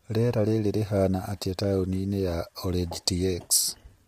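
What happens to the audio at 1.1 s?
At 1.1 s the speech is rough and grainy, as it is throughout the clip, with noise filling the gaps between pitch harmonics and a dull or synthetic-sounding top band. This is likely low-delay AAC compression (AAC-ELD), at a rate that suggests about 32 kbps. At this low rate its coarse quantization leaves noise between the harmonics, heard as graininess, unlike the swirly, watery smearing of ordinary long-frame codecs.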